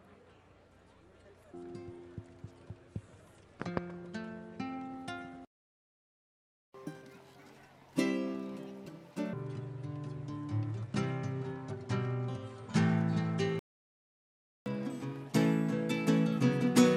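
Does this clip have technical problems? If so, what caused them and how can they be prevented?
Yes. Playback stall at 5.45 to 6.74 s and again at 13.59 to 14.66 s: the sound stops mid-flow for about 1.29 s and then 1.07 s. The likely cause is the player running out of buffered data or having its playback thread blocked, leaving the output silent until it recovered. Prevention: keep a deeper playback buffer and run the audio thread at high priority, free of blocking work.

Catch-up at higher speed from 6.74 to 9.33 s at 1.5 times speed, about seven semitones sharp, then from 14.66 s to the end at 1.25 times speed, about four semitones up. After each stall the player resamples its backlog to regain lost time, so speed and pitch rise together. Prevention: use time-stretching that preserves pitch, or resume at normal speed and skip ahead.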